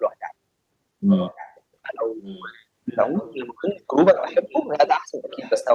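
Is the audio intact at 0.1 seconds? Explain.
Yes, at 0.1 seconds the audio plays through cleanly, with no dropout, click, distortion or other audible fault at that moment.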